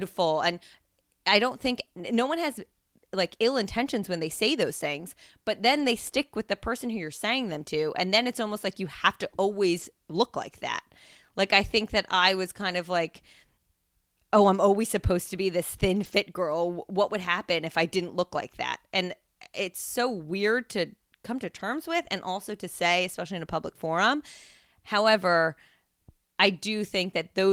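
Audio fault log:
5.75–5.85 s, 9.77–9.83 s (after "like you have to"), 12.15–12.21 s (after "I think that"), 16.03–16.13 s and 21.55–21.61 s (after "weird to come to"): lost packet rebuilt from error correction. Each 40 or 60 ms loss, which fits two or three dropped packets, was filled from a low-bitrate copy carried in the next packet. There is no gap, but each spot turns briefly rougher and noisier.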